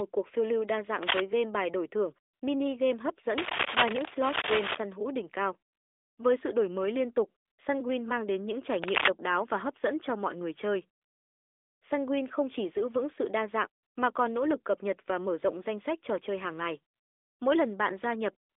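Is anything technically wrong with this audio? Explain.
Yes. There are two kinds of fault, heard over mobile-phone speech that is band-limited to roughly 300 Hz to 3.6 kHz.

Cable scratch noise occurs at 1.03–1.20 s, 3.38–4.80 s and 8.82–9.11 s. Dense, ragged bursts of scratching sit on top of the speech, about as loud as it or up to about 5 dB above. The likely cause is a worn cable or connector whose contact resistance fluctuated as it moved.

AMR comfort noise replaces the real background at 2.34–2.42 s, 5.72–6.18 s, 7.46–7.58 s (after "đổi mới liên tục"), 11.02–11.82 s (after "cho mọi người chơi"), 13.82–13.96 s, 16.94–17.40 s (after "trò chơi hàng ngày") and from 18.50 s to the end. In each pause the phone stopped sending speech frames for 80 to 800 ms, and the receiver substituted smooth synthetic noise that audibly switches in and out.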